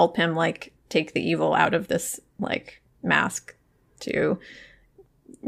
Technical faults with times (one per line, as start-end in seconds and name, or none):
none